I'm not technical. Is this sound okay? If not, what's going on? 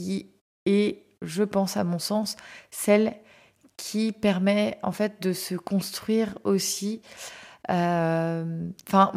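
Yes, nothing wrong can be heard anywhere in this speech recording.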